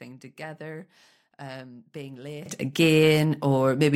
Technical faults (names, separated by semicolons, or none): sudden gain jump